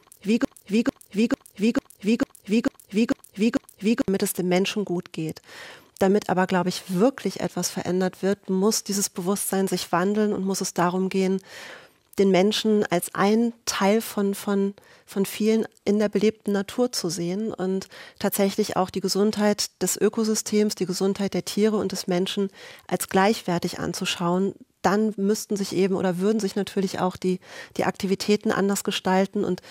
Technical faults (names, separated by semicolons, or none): broken-record loop